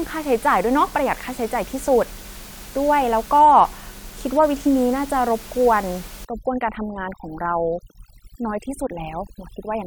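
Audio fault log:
6.25–9.87 s, overdone noise removal: from 6.25 s to the end, the room noise, about 20 dB below the speech before this point, drops and breaks up into twinkling specks. A noise reducer set too hard is pushing single frequency bands down or off whenever they fall near its noise estimate, removing quiet speech detail too. Unlike a gate, which mutes everything at once, it works band by band, so isolated tones flicker through.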